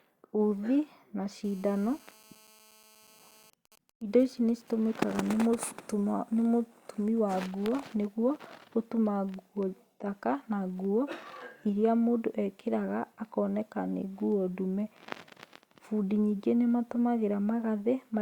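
From 1.44 to 3.50 s a hard, raspy buzz sits under the speech, about 29 dB below it, pitched at roughly 217 Hz and thick with harmonics, and it holds steady with no relation to what is being said. This is GSM phone buzz. A 2G handset nearby, in an active call, transmits in bursts about 217 times a second, and the audio circuitry rectifies those radio pulses into an audible tone.

At 3.53 s the continuous buzz gives way to GSM signalling bursts, lasting until 5.70 s: even ticks with a longer 217 Hz buzz twice a second, roughly 30 dB below the speech. A nearby handset is in a call but its user has gone quiet, so it sends only short groups of radio bursts instead of a steady stream. The audio path rectifies each group, giving this broken, rhythmic pattern.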